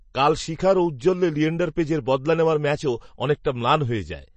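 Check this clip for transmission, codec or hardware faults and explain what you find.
One codec fault runs through the whole recording: MP3 compression is the likely cause. Short of bits, the encoder has dropped everything above 8.3 kHz and zeroed weaker frequency lines that then flicker on and off between frames, consistent with a low bitrate around 32 kbps. The result is plainly audible: the speech sounds dull and watery, with a swirling, metallic edge on s sounds and smeared consonant onsets from start to finish.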